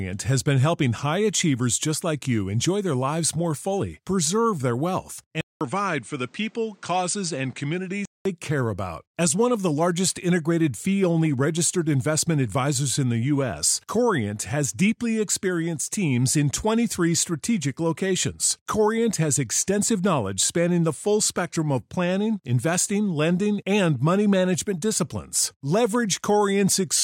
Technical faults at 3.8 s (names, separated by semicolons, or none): none